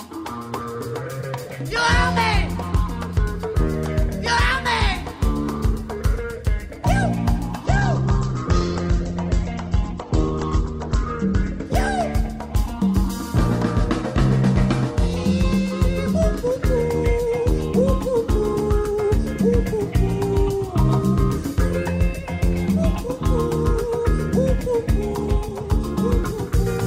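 At 7.66 s the audio switches abruptly, with no gap, to an adaptive stream at a lower bitrate, and stays there until 11.66 s, about four seconds. The player evidently fell back to a cheaper encoding when throughput dropped. Content above 8.2 kHz disappears, the top end turns dull, and coding artefacts become audible. The size of the loss fits a step down from an Opus stream near 64 kbit/s to one near 12 kbit/s.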